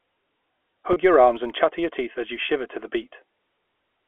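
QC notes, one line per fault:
throughout: filter restarted on every block. A faint buzz at 93.8 Hz, consistent with 512-sample blocks, rises and falls with the sound's level, unlike steady mains hum.
0.93–0.96 s and 2.46–2.49 s: packet loss with pitch repetition. Each 30 ms gap, before "your arms and chatter" and between "your teeth as you" and "to the", is filled with a briefly held, buzzy pitch rather than a silent dropout.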